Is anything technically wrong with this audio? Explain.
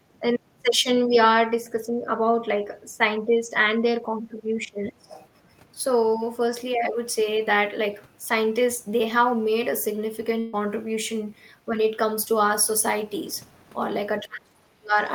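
Yes, a few things. The speech dips in level four times: 1.5 to 2.09 s, 2.41 to 5.12 s, briefly at 5.73 to 5.78 s, and 14.22 to 14.98 s. The drops range from mild to very deep, worst near the end. That's likely speech suppressed in double talk, where the echo canceller couldn't tell the talker from loudspeaker echo and turned everything down.

From 5.08 to 5.28 s a faint second voice slips in, roughly 20 dB under the talker. It sounds like the other side's voice leaking through, likely because the echo canceller left some of the loudspeaker signal in the mic pickup.

At 10.39 to 10.55 s there's a burst of packet loss. The receiver stretches the last sound for about 130 ms, fading it as it goes, then jumps ahead, so roughly 140 ms of speech is simply gone.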